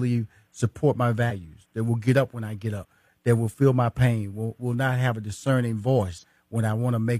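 A speech clip with three places where compressed frames are skipped. The audio jumps forward at 1.26 to 1.30 s, after "support my"; at 2.79 to 2.85 s, after "up when I get"; and at 6.18 to 6.24 s, after "not have a discerning". Whole frames of about 46.4 ms never play. That is one frame, roughly 50 ms, at the first spot and two, roughly 100 ms, at the others.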